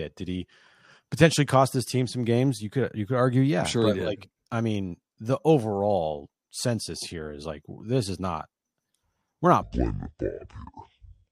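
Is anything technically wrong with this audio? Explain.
Yes. From 9.62 s to the end at 11.32 s there's a section at the wrong speed: the speech drops to about 0.56 times normal, roughly ten semitones lower, sounding deep and dragged. That's likely playback against the wrong clock, slowing pitch and pace together.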